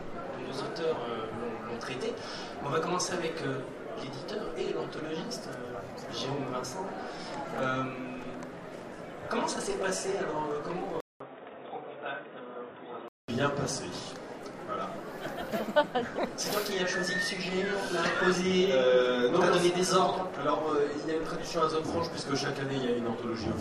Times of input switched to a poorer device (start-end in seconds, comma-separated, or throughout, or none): 11.00-13.28